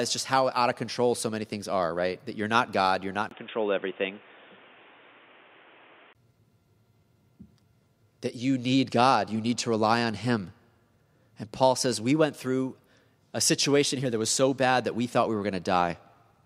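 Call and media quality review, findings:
Input switched to a poorer device, 3.29–6.15 s: speech dulls, 20 ms gap at 3.29 s. Likely second mic or headset call profile. Spectrogram: nothing above 3.6 kHz, new noise floor about 30 dB under speech. Waveform: level unchanged.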